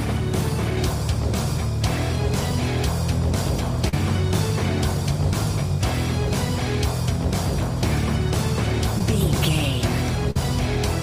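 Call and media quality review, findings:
Short concealed packet loss, 3.88 to 3.93 s: brief smear where the decoder's concealment extends the last sound for about 40 ms over a 50 ms hole, then crossfades back. Jitter buffer/decoder PLC.

Short concealed packet loss again, 8.99 to 9.01 s: brief wobble, about 12 ms of filled-in audio over a 10 ms gap. Same PLC path.

Burst of packet loss, 10.31 to 10.36 s: several packets gone in a row. Receiver holds and fades the last sound as a buzz or hiss for about 46 ms, then jumps ahead, with roughly 40 ms of the original skipped. Network loss upstream of the decoder's concealment.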